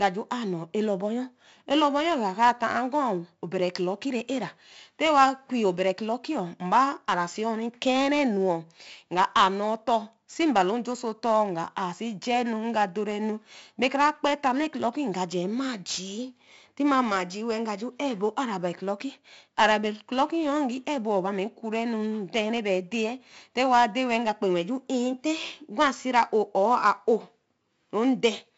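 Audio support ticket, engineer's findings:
4-bit ADPCM compression, whole clip. Gritty hiss riding every loud syllable, smeared sharp onsets where the step size lags, nothing above 7.7 kHz. Heavy damage. Sounds like a 64 kbps stream, 4 bits at a 16 kHz rate.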